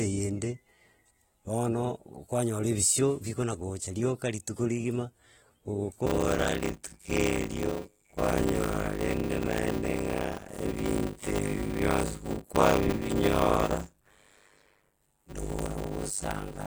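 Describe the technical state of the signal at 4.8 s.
At 4.8 s, as throughout, the speech shows AAC compression. The high-frequency cut-off is lowered, and sibilants turn warbly and fizzy, which a clean low-pass filter wouldn't do. This likely comes from coarse AAC-LC quantisation at a bitrate near 27 kbps.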